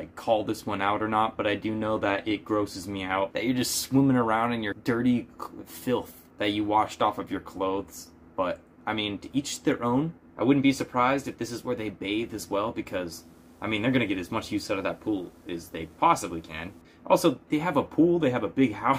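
From 13.2 to 16.8 s there's video or display buzz, a 60 Hz field-rate hum with hash on top, sitting well below the sound, from a screen or cable coupling in.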